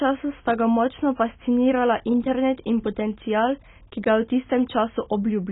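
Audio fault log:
Throughout: AAC compression, likely at a very low bitrate around 16 kbps; nothing above 3.8 kHz, so the speech sounds dull, smeared and warbly.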